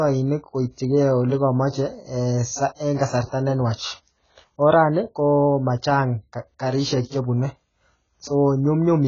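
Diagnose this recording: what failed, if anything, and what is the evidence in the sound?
The codec stage is the likely culprit: the speech shows heavy AAC compression damage from start to finish, which points to AAC-LC running at a very low bitrate, around 16 kbps. Starved of bits, the encoder drops the cut-off so that nothing survives above 7.5 kHz, making the voice dull. It also quantises the remaining bands coarsely, leaving spectral holes that smear consonants and give sibilants and held vowels a warbling, fizzy texture.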